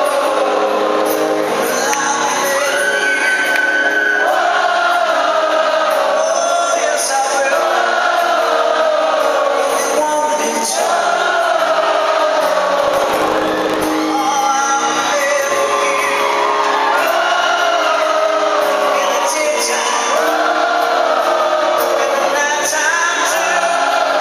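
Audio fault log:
12.82–13.95 s: block size mismatch (truncated). Each block's tail is discarded, leaving a 50 Hz buzz at the block rate and sound running 1.16 times fast, consistent with 1024-sample blocks being written. Timbre stays normal, unlike a sample-rate error.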